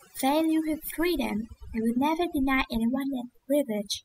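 Overdone noise removal runs through the whole speech clip. A noise reduction stage was pushed too hard. It cut frequency bands that sat near its noise estimate, and quieter parts of the voice went too. The background drops and breaks up into twinkling specks.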